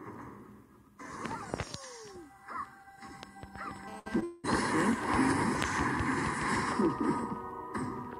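From 3.88 to 5.43 s, a nearby 2G phone in an active call is transmitting in bursts 217 times a second, and the audio circuitry rectifies those radio pulses. The result is a GSM phone buzz: a steady, hard, raspy buzz at 217 Hz, rich in harmonics, sitting about 17 dB below the signal and unrelated to it.

Under that buzz, at 3.99 to 4.08 s, a burst of packet loss removes about 60 ms of audio before it could be played. The receiver fills the hole by carrying the last sound forward and letting it fade. The audio then resumes past the missing stretch.

At 4.20 s, a short concealed packet loss drops about 20 ms. The decoder papers over the gap with a continuation of the preceding sound and blends back into real audio. It is heard as a brief smear or wobble.

From 4.24 to 4.45 s, the audio turns into a held, fading continuation of the last sound for about 0.2 s, with no true silence, before normal audio returns further on. 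This is likely a long network dropout, with the receiver covering the lost stretch.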